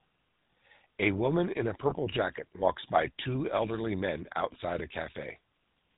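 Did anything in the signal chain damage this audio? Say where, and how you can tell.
Yes. The GSM full-rate codec runs throughout: the spectrogram shows nothing above 4 kHz, and the sound has a buzzy, gravelly roughness consistent with its 13 kbps pulse-excited model.

A loudspeaker feedback squeal comes from the acoustic playback path: 1.38 to 4.12 s, ending just before "outside a". It appears as one horizontal spectrogram line at 4.2 kHz, swelling over about two seconds to about 10 dB above the signal.

Lost GSM frames occur at the network stage, at 1.90 to 1.95 s, consistent with one missing 20 ms frame. The waveform shows a held segment, heard as a brief metallic ring from the repeated parameters.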